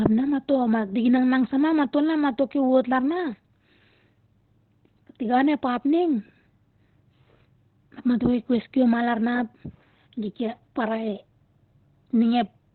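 Opus compression runs through the whole recording. The speech is muffled and hoarse, with heavy codec damage and nothing above 4.2 kHz. The likely cause is the encoder starved of bits and falling back to its SILK speech mode at narrowband bandwidth, which fits a rate of around 12 kbps. It models the voice coarsely and discards the upper spectrum, leaving a thin, rough, telephone-like sound.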